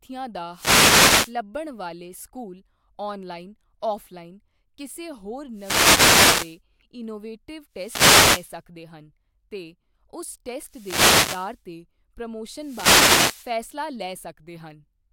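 A speech recording with five wireless microphone noise hits, at 0.51–1.36 s, 5.52–6.60 s, 7.72–8.59 s, 10.61–11.61 s and 12.53–13.58 s, each close to a second long. Each is a burst of static that swells over the speech and then clears. The sound points to an analogue FM radio link whose signal dropped as reflected paths cancelled at the receiver, letting receiver noise rise until the carrier recovered.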